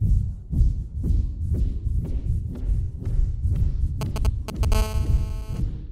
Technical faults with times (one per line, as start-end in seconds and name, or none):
4.01-4.74 GSM signalling bursts
4.75-5.60 GSM phone buzz